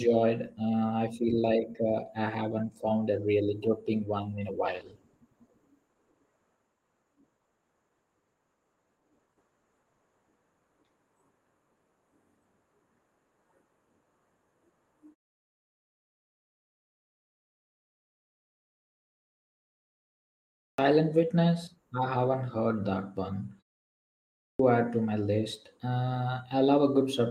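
From 4.67 s to 21.81 s there is a call bitrate drop. The call's bandwidth estimate fell, so the encoder was told to spend far fewer bits, which fits a cut from about 32 kbps to 15 kbps. It then codes the speech more coarsely and narrows its band from 20 kHz to 12 kHz. The speech loses its top-end air and turns rough and muffled, and it stays at its thinnest for about 5.6 s before it recovers.

At 20.23 s there is a clipped start after a pause. The playback device had gone to sleep during a 5.2 s silence and needed time to wake. During that time it swallowed about 0.55 s of the first sound, so the speech jumps in abruptly, already under way, with its opening missing. The same fault happens again at 23.94 s, after only a 0.4 s pause. About 0.65 s is lost there, and the speech again starts without its first sounds.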